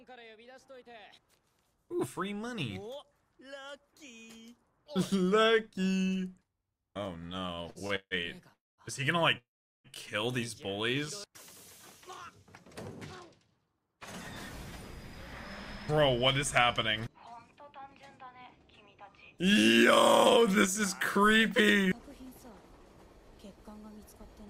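A block of digital silence at 7.05 s lasts only about 0.73 ms, which fits a 32-sample chunk of the output buffer being left as zeros. The abrupt cut out and back is heard as a tick or dip. Repeated stalls (stutter) follow between 7.39 and 8.14 s. Seven separate hitches occur, the longest 155 ms, as the jitter buffer kept running dry and the receiver stretched the last sound each time. Concealment fills about 295 ms, roughly 40% of that stretch, so the audio drags and stammers while nothing is lost. Two call audio freezes follow, at 8.53–8.81 s and 9.38–9.87 s, likely from packets held up in transit. The last sound is drawn out and fades to silence for about 200 ms and 400 ms respectively. The audio then resumes where it stopped, so the freezes add roughly 250 ms and 465 ms of delay. A jitter buffer slow-down runs from 10.91 to 11.31 s. Single pitch periods or pause fragments are repeated to rebuild a reserve, adding 38 ms, so the sound plays at 93% speed with unchanged pitch and drawn-out sounds. 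Jitter buffer speed-ups then trim the excess delay by cutting short pitch-period pieces. They run at 102% from 15.92 to 19.43 s (around 70 ms removed), at 104% from 20.38 to 22.32 s (around 100 ms), and at 102% from 23.18 s to the end (around 40 ms). This makes the audio run slightly faster at the same pitch.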